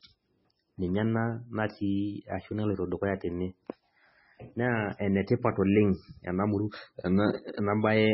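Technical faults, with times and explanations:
Throughout, MP3 compression: The speech sounds dull, with nothing above about 5.6 kHz. Heavy damage leaves it watery and swirly. The likely cause is an encoder starved of bits, which fits about 16 kbps. It cut the treble and dropped weak frequency lines.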